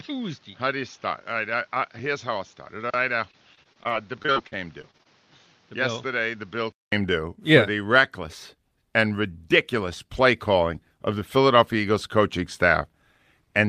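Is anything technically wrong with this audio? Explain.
Yes. Input switched to a poorer device, 0 to 6.92 s: speech in this stretch is band-limited, with nothing above 7 kHz. It is also roughly 10 dB quieter, with its own background noise about 30 dB down. The likely cause is a narrower-band microphone or headset profile. After a short silence of about 200 ms at 6.92 s, the fuller sound returns.

Repeated packet loss (robotic sound), 3.31 to 5.07 s: audio data kept going missing, and each hole, the longest 39 ms, was filled by stretching the preceding sound. With over a dozen such patches covering about 17 percent of the span, the speech turns choppy, with pieces missing.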